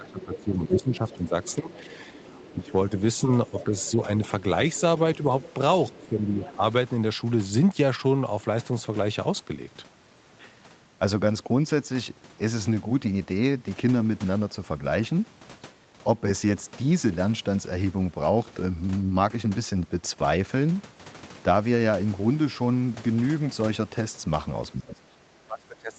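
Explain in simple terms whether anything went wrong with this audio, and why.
Speech suppressed in double talk: the speech dips at 0 to 1.87 s, 2.5 to 3.73 s, 5.87 to 6.62 s, and 24.72 s to the end. The likely cause is an echo canceller turning down both sides while they overlapped.

Other side's voice leaking through: a faint second voice sits under the speech from 0.06 to 4.8 s and from 5.41 to 6.54 s, likely loudspeaker sound the echo canceller missed.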